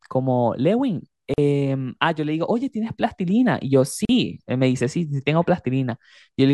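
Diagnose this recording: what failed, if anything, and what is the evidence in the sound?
Gap at a join of encoded pieces, at 1.34 s and 4.05 s: about 42 ms and 41 ms silences cut into the speech, left by untrimmed encoder delay and final-frame padding.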